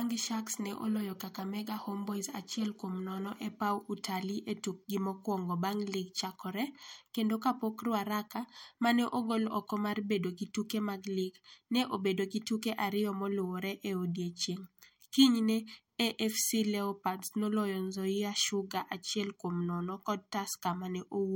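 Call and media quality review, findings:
No findings from the call and media quality review.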